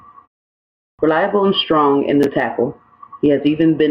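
Gain pumping runs through the whole speech clip. The gain swings around 10 dB. Loud and soft parts sit close in level. The likely cause is gain set far too high, with a fast limiter pulling it down.

At 0.84 s, after a 0.65 s pause, there is a clipped start after a pause. The output device had gone idle and needed time to wake. About 148 ms is swallowed, up to 0.99 s. The speech begins abruptly, missing its first sounds.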